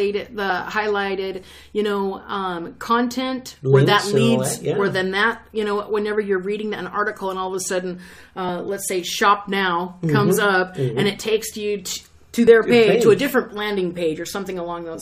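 At about 12.47 s there's a tiny skip where the waveform jumps. That's an overlap between stream segments: two 4-second segments claimed the same stretch of time, and the player trimmed a few milliseconds of real, undoubled sound to make them fit.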